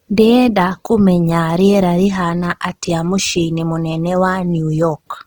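Throughout the speech, the sound has a noisy, rough, grainy texture, likely from Opus compression in its CELT music mode at a rate that points to about 16 kbps. Content still reaches about 20 kHz, but missing detail is filled with folded or noisy energy, so it lacks MP3's swirling holes.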